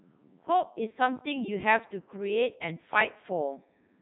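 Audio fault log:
Throughout, Codec 2 vocoder: the speech sounds robotic and buzzy, with heavy damage and nothing above 3.9 kHz. Only pitch, voicing, energy and a spectral envelope survive, and the decoder rebuilds the voice from sine waves, consistent with the 3.2 kbit/s mode.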